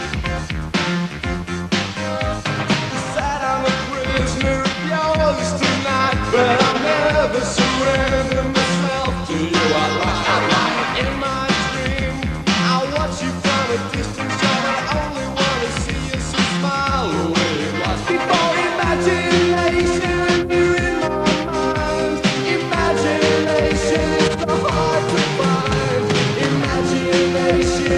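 Nothing in this audio calls for a technical note, as there's no fault to point to anywhere in it.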